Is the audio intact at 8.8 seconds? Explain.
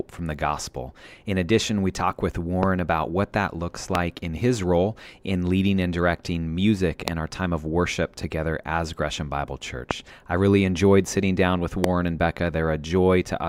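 Yes, at 8.8 seconds the speech plays through intact, with no dropout, click, distortion or other technical fault at that moment.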